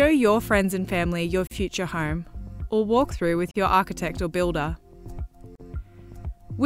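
The audio was encoded as separate pieces about 2 s long and joined without trimming, so each encoder's start-up delay and final-frame padding stayed in as silence. The result is a gap at a join of encoded pieces at 1.47 s, 3.51 s and 5.55 s, lasting about 41, 43 and 43 ms. Each is a dropout with smeared edges, after which the sound picks up where it broke off.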